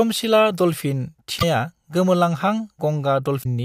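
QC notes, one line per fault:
1.36–1.43 s and 3.40–3.46 s: damaged data in a compressed stream. Corrupted bytes make the decoder misread frames and lose sync while it hunts for the next header. The result is a glitch of roughly 70 ms.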